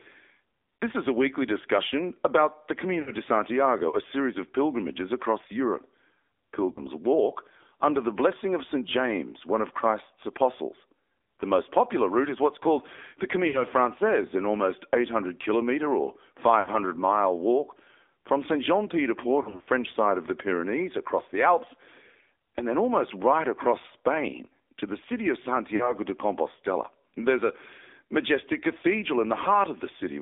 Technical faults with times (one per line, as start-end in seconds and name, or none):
0.00-30.21 AMR narrowband mobile codec
0.78-0.83 lost AMR speech frames
3.02-3.11 lost AMR speech frames
6.72-6.85 lost AMR speech frames
13.48-13.64 lost AMR speech frames
16.60-16.70 lost AMR speech frames
19.42-19.68 lost AMR speech frames
25.76-25.94 lost AMR speech frames